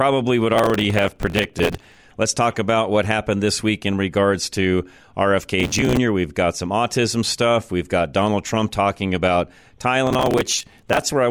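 Processor overload crackle tears through the sound from 0.54 to 1.97 s, again at 5.60 to 5.97 s, and at 10.07 to 11.02 s. Tiny buffers of about 5 ms keep missing their deadlines and replaying stale audio with hard edges, so each stretch turns into gritty crackle.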